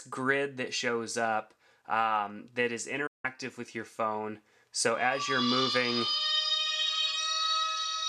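A digital broadcast dropout hits at 3.07 s: the audio fades out over about 8 ms and stays silent until 3.25 s. The receiver stopped getting valid frames, muted, and resumed with later material, so roughly 170 ms of the programme is simply missing.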